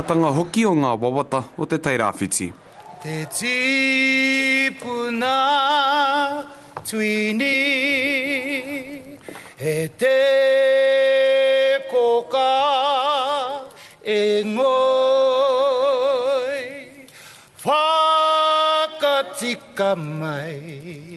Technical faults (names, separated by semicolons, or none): skip ahead; jitter buffer speed-up